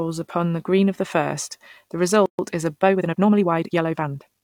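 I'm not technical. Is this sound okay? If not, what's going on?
No, there are two problems. At 2.26 s, right after "of the first the", a gap at a join of encoded pieces leaves a break of about 130 ms before "is a" carries on.

From 2.8 s to the end, just after "is a", it's a time-stretched section. The speech runs about 1.8 times faster and sounds rushed, but the pitch doesn't change, likely from software squeezing it to fit a length.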